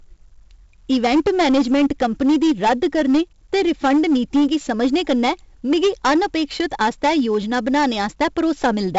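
From the first moment the speech carries hard clipping, driven about 11 dB past full scale, so roughly 7 percent of samples sit on flat-topped waveform plateaus, sounding harshly fuzzed.

Throughout, 4-bit ADPCM compression adds gritty, level-tracking hiss and smeared attacks; the spectrogram stops dead at 7.7 kHz, consistent with a 64 kbps, 16 kHz stream.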